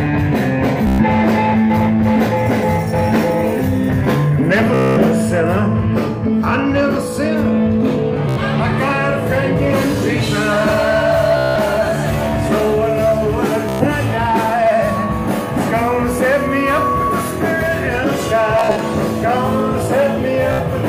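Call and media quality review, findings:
Buzzy machine-gun stutter, short slice repeating, then audio resumes further on: 0.87–1.04, 4.74–4.98, 8.29–8.40, 11.37–11.57, 13.69–13.87, 18.59–18.82 (broken bursts, longest 46 ms), 20.53–20.60 s. Bluetooth stutter: receiver replays last buffer over 61–229 ms of missing packets; repeat length fits roughly 15 ms packets.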